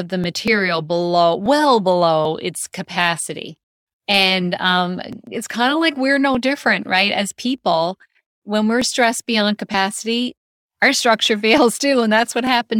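Speech, with a steady train of clicks. They recur every 1.23 s, about ten in all, from 0.24 s to 12.47 s. These are likely clock drift buffer slips. Two clocks differ by around a tenth of a percent, so a few dozen samples are dropped or repeated at each slip. Three separate skips also interrupt the speech, at 0.48 s, 2.25 s and 5.27 s. Each one is a small forward jump in the sound, with no gap of silence. These point to dropped buffers (overrun), likely from samples overwritten before they were read. Roughly 10 ms is lost at the first and third, and about 20 ms at the second.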